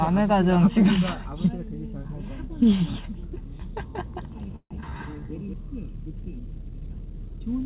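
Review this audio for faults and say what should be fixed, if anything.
From 3.79 to 5.53 s, a doubled audio track appears, likely from a second, slower capture path mixing the audio in again. A full-band copy about 5 dB quieter trails roughly 200 ms behind, with no room colour, and it starts and stops abruptly. Make sure each source is captured and mixed through only one path.

From 4.56 to 4.73 s, a call audio freeze occurs, likely because delayed packets drained the jitter buffer. The last sound is stretched and fades into about 70 ms of silence, filling 145 ms in all, then resumes where it left off with nothing lost. Give the network path more headroom or allow the jitter buffer a larger target delay.

From 4.81 to 4.84 s, a skip ahead happens as a stretch of audio is dropped while later audio was already waiting. Playback jumps forward by roughly 100 ms, and the two sides are joined with only a 16 ms bridge. 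Let the buffer shrink gradually rather than dropping whole stretches of audio.

From 4.85 to 5.27 s, a jitter buffer slow-down occurs as the receiver rebuilds its reserve by repeating pitch periods. This adds 79 ms, so the sound plays at 83% speed without a pitch change and sounds drawn out. Keep the buffer's target delay stable so it doesn't need to refill this sharply.

The clip also passed through a call path with nothing above 4 kHz, which points to G.711 mu-law at 64 kbps.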